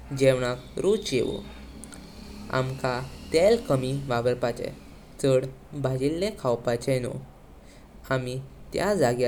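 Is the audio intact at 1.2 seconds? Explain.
Yes, the speech at 1.2 seconds plays through intact, with no dropout, click, distortion or other fault at that moment.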